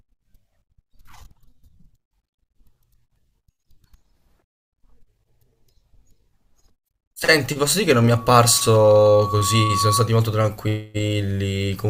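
A single steady tone near 1.1 kHz rises out of the speech at 8.1 s, swelling over roughly a second and a half until it sits at about the same loudness as the talker, then cuts off at 10.15 s. That is loudspeaker feedback squeal: the microphone was picking up a loudspeaker carrying its own signal, and at 1.1 kHz the loop gain went above one, so that frequency fed itself and grew.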